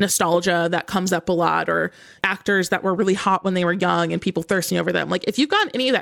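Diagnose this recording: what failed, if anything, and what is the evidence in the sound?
The failure is at the codec stage, a Bluetooth SBC bit pool drop. From 3.05 s, just after "or actors that were", to the end of the speech, the treble goes dull and a gritty, granular noise sits under the audio. That fits the encoder cutting its bit pool from 31 to around 14, roughly 99 kbps: the highest sub-bands are starved of bits, and the remaining bands are quantised so coarsely that the error becomes audible grit.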